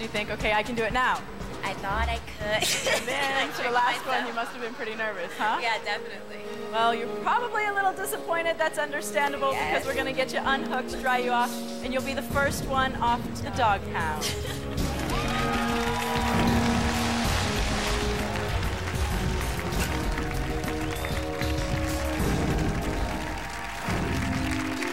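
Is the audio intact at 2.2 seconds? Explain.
Yes, the audio at 2.2 seconds is intact, with no audible dropout, click, distortion or other fault at that moment.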